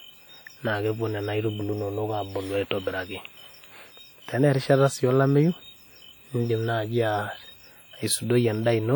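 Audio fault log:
throughout, WMA compression: the speech was likely passed through a WMA transform encoder at a low rate, with damage that fits a bitrate around 48 kbps. Long transform blocks smear each frame's quantisation error over tens of milliseconds, so the speech sounds ringing and washy, with a hiss that rises and falls with the signal, while weak spectral detail drops out. The band still reaches about 20.1 kHz, so the damage is plainly audible without any dulling of the top end.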